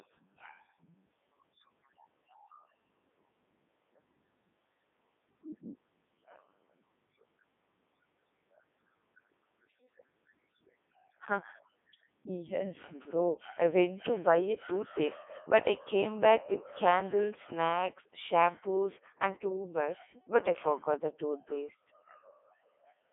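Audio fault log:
throughout, Codec 2 vocoder: The speech was carried by the Codec 2 digital-radio vocoder, and the damage is heavy even at its highest 3.2 kbit/s mode. Only pitch, voicing, energy and a coarse spectral envelope get through, and the decoder rebuilds the sound from sine waves instead of the original waveform. The result is robotic and buzzy, squeezed into a narrow line band of about 250 Hz to 3.6 kHz, with nothing at all above 3.8 kHz.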